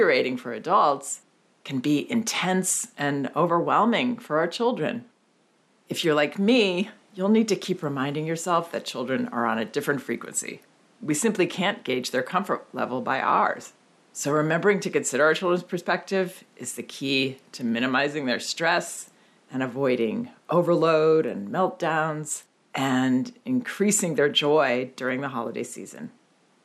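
No technical faults can be heard in this recording.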